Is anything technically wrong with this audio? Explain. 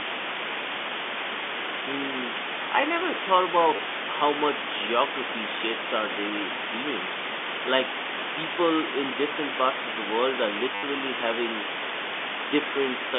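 Yes. Low bit depth with dither runs throughout. The speech seems reduced to about 3 bits, and dither turns the rounding error into a broad, even hiss almost as loud as the speech. On a spectrogram it fills the telephone band evenly, which is 200 Hz to 3.5 kHz on this G.711 line.

Packet loss with the last packet repeated occurs twice. The first is at 3.76 to 3.79 s, between "I never thought" and "how much". The second is at 10.75 to 10.83 s, just after "of the world are". The receiver replays the last packet to fill 30 ms and then 80 ms. The lengths fit 10 ms packets, which would put the stutter's buzz near 100 Hz. Each repeat sounds robotic. On a waveform the same short segment repeats, and on a spectrogram the spectrum holds still.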